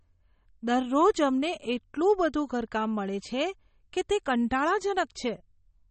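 All the way through, the speech has a hard ceiling with nothing above 8.4 kHz, plus plainly audible watery, swirly smearing on the s sounds and consonant attacks. That's likely MP3 compression, starved enough that it points to a bitrate around 32 kbps.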